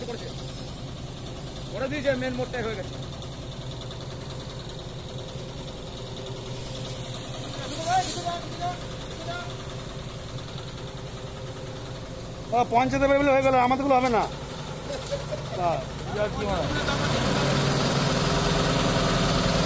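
No technical faults can be heard anywhere in the audio, and the signal stays intact throughout.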